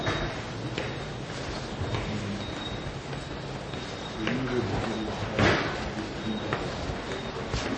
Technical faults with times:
0.00-7.77 MP3 compression

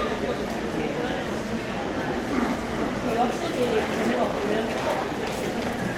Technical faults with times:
none

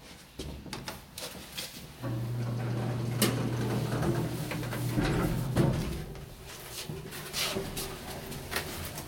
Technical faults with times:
none

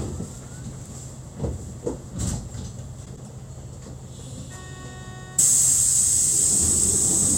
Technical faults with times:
3.05-3.28 frames out of order

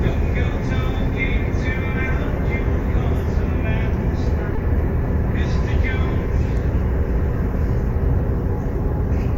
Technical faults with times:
4.55-4.59 short concealed packet loss

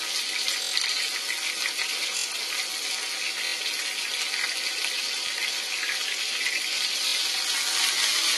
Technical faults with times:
0.00-8.37 AAC compression
0.63-0.72 repeated buffer
2.18-2.25 repeated buffer
3.46-3.53 repeated buffer
5.27-5.29 repeated buffer
7.08-7.13 repeated buffer

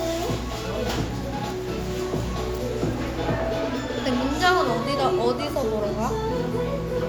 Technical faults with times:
none

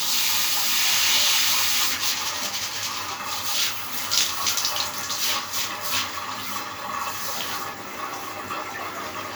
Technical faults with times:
none

